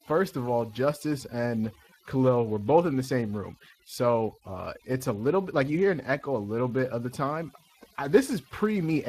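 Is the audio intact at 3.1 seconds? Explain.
No. At 3.1 seconds, as across the whole clip, the speech carries overdone noise removal. The suppressor was set so aggressively that any frequency band close to its noise estimate is pulled far down or shut off entirely, and the weaker parts of the speech are cut along with the noise. The background collapses into near silence dotted with twinkling specks.

The same moment also shows Speex codec damage throughout, plainly audible. Speex is a CELP speech coder, and its artefacts point to a rate of roughly 22 kbps, which leaves little data for the excitation signal that drives the voice model. The result is a rough, hoarse, noisy grain laid over the speech. Nothing is present above about 15.3 kHz.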